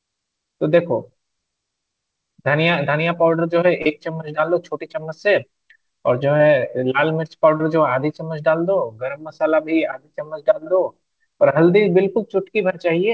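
Speech over a call path that tops out around 8 kHz, and there's short concealed packet loss at 3.82–3.87, 6.37–6.41 and 7.57–7.61 s, where the receiver papered over 20 to 40 ms gaps by extending the previous sound, leaving brief smears.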